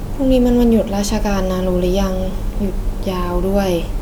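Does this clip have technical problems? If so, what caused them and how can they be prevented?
No, the signal shows no technical problems that need a cause or a fix.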